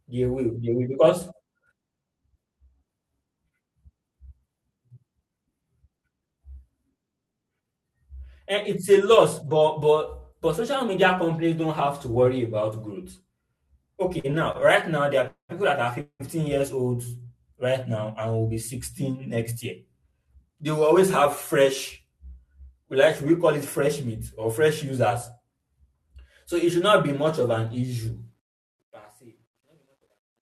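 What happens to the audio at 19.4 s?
At 19.4 s the speech is inside a jitter buffer speed-up running from 19.00 to 19.52 s. The receiver trims short pitch-period slices to drain excess buffered audio, removing roughly 40 ms. Playback runs about 6% faster at unchanged pitch, so the speech sounds briefly hurried.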